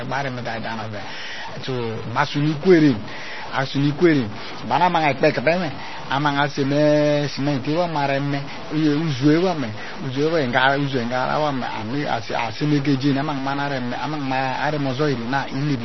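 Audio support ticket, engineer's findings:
Distortion on the speech, start to end. Pauses filled with hiss. Likely a stuck bit: one data line or converter bit pinned, offsetting half the samples.

Watery, swirling speech throughout. Dull top, nothing above 5.9 kHz. Smeared attacks. Likely heavy MP3 compression, consistent with roughly 24 kbps, dropping treble and weak frequency lines.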